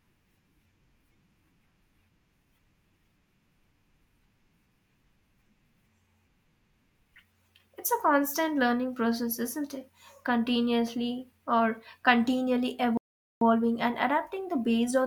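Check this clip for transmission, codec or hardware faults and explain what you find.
There's one fault here: a rebuffering stall at 12.97 s, just after "or continually". The speech drops to silence until 13.41 s, then picks up exactly where it left off. What's happening is the player ran through its downloaded audio and had to sit and wait for more before carrying on. Nothing gets skipped, but about 0.44 s of dead air is added, so you hear a sudden gap that's just a pause.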